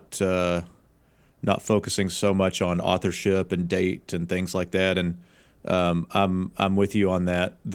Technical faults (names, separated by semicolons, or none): none